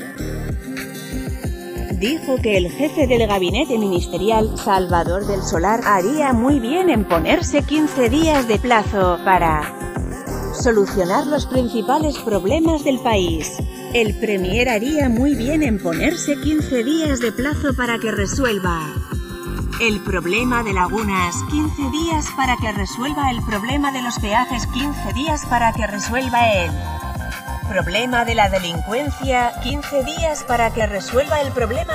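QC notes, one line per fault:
Throughout: channels drifting apart. The two channels run on clocks differing by about 70 ppm, so their offset grows to roughly 1.5 ms by the end. Summed to mono, comb notches sweep slowly through the spectrum. This is heard as slow flanging.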